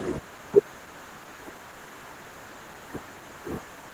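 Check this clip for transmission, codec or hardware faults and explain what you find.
One fault runs through the whole clip: Opus voice compression. The encoder runs in hybrid mode, with a linear-prediction coder handling speech below 8 kHz and a transform layer above it. The sound suggests a bitrate of about 16 kbps with 20 ms frames. That budget forces coarse coding of the excitation, so the speech comes out plainly hoarse and slightly robotic. The band stays full, with content reaching about 20.2 kHz.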